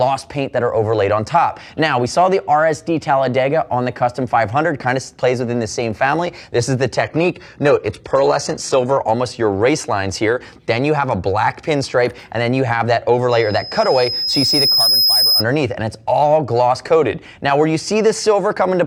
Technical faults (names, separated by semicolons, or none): adaptive stream at a lower bitrate; loudspeaker feedback squeal